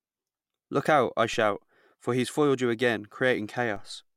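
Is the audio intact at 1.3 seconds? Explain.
No. At 1.34 s, just after "out I", a DC step shifts the waveform's zero line by about -36 dBFS, causing a low thump; the offset then decays slowly, as through a 2 Hz high-pass.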